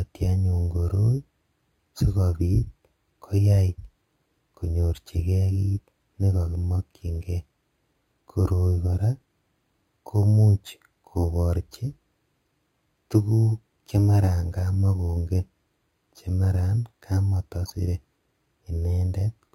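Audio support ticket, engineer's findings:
Imaging from sample-and-hold upsampling, throughout. Bright metallic fizz riding on the speech, rising and falling with its level. Lowest mirror band sits about 5.5 to 11 kHz, about 31 dB below the signal, moving opposite to pitch. Points to audio at roughly 11 kHz raised to 44.1 kHz. Component: resampler. Samples repeated, no smoothing filter. Spectrum copies left around each multiple of the old rate.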